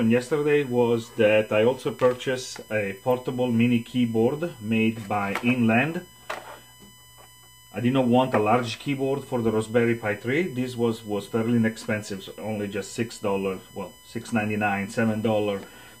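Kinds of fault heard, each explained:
USB whine: current drawn by the USB bus in 1 ms frames leaks into the audio through the power or ground, so a steady whine at a fixed 1 kHz pitch runs under the whole clip, strongest at its 3 kHz harmonic and sitting roughly 25 dB below the sound.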